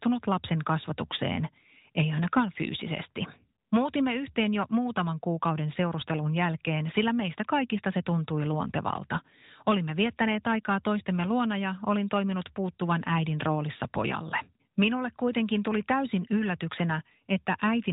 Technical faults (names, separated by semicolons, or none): none